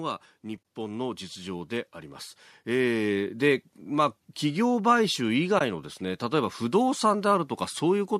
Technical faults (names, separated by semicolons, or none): AAC frame loss with muting; automatic gain rising